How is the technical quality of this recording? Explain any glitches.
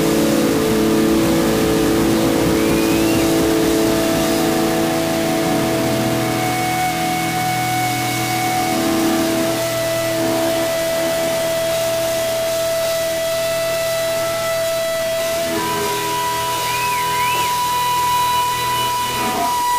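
Technical quality is poor throughout. The likely cause is low bit depth without dither: the audio appears to have been rounded to only 3 bits, with no dither added. The rounding error follows the signal, leaving a grainy, shifting distortion only about 10 dB below the sound, while quiet passages sputter between steps or drop to silence.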